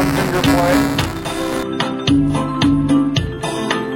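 Right from the start and running to about 1.63 s, there's buffer tearing: a steady robotic buzz at around 345 Hz riding on the sound, which fits a 128-sample buffer. The writer and the hardware reader have drifted so they cross inside each period, so a small slice of every buffer, something like a tenth, plays audio from roughly 10 ms earlier. Hard joins on either side of that stale chunk repeat at the buffer rate, giving the rattle.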